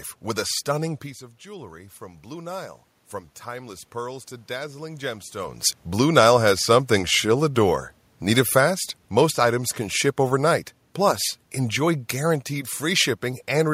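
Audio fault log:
1.46–2.87 s and 3.44–5.64 s, automatic gain rising: Each time, the level at the microphone has just dropped by about 15 dB; the first drop fits with the talker leaning away around 1 s. The automatic gain control reads that as too quiet and ramps its gain up by about 4 dB over roughly one to two seconds. The room noise climbs along with the voice, which is why the whole sound swells rather than the talker alone getting louder.
6.0–13.69 s, automatic gain falling: Right after the talker moves near 5.5 s, the gain control starts pulling its gain down, by about 7 dB in total. It does this slowly, across nearly eight seconds, so the sound starts loud and then gradually sinks. The background room noise drops with it, which tells you it's the gain moving and not the talker easing off.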